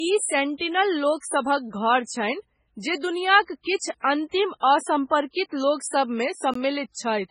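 A speech recording with heavy coding damage throughout. Nothing is present above 10.5 kHz, and the remaining band sounds watery and swirly, with weak spectral detail flickering in and out from frame to frame and sibilants turning metallic and chirpy. The likely cause is MP3 compression at a very low bitrate, consistent with something around 16 kbps, where the encoder discards the treble at a fixed cut-off and zeroes quieter frequency lines to stay within budget. Around 1.17 to 1.23 s there is pre-echo: a short hiss of roughly 58 ms runs ahead of a sharp onset, and the attack itself sounds blunted. This happens because the transform spreads quantisation noise across the whole block, so noise scaled for the loud attack late in the block also fills the quiet stretch before it. At 6.54 s a block of digital silence cuts about 17 ms out of the signal. The audio drops straight to silence and returns with no fade, heard as a short hole. 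Such a block of zeros points to the output buffer not being filled in time, or to an invalid value reaching the output.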